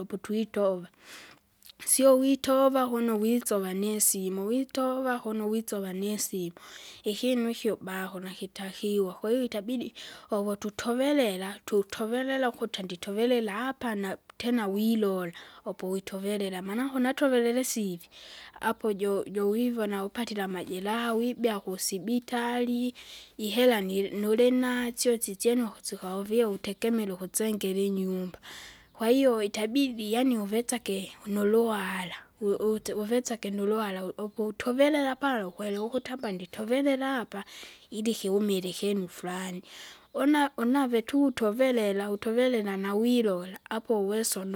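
Nothing in the recording stood out as a technical fault on listening.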